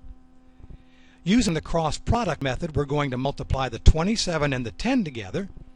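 At 1.49, 2.42 and 3.25 s the audio skips ahead by roughly 50 ms with no silent gap, likely a dropped buffer (overrun), where samples were overwritten before being read. Waveform and spectrogram each show an abrupt seam, not a pause.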